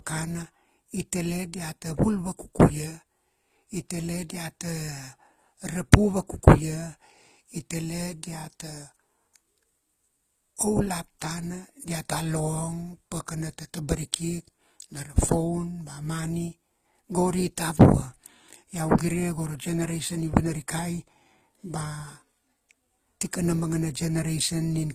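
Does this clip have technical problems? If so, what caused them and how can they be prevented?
Yes. Throughout the speech there is a layered quality: the artefacts of two different codecs are heard together, and nothing is heard above 14.9 kHz. This is likely transcoding between lossy codecs, with the audio encoded first as Opus and then re-encoded as HE-AAC, both at low rates that fit about 24 kbit/s. The second encoder spends its scarce bits reproducing the first one's artefacts and adds its own. To prevent it, keep a lossless master and encode to the final codec only once.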